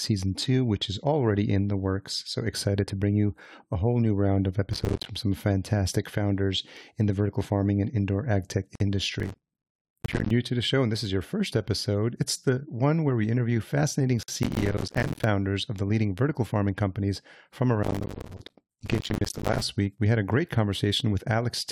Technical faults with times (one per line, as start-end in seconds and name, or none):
4.73-5.06 processor overload crackle
8.75-8.80 gap at a join of encoded pieces
9.20-10.31 processor overload crackle
14.23-14.28 gap at a join of encoded pieces
14.43-15.24 processor overload crackle
17.83-19.61 processor overload crackle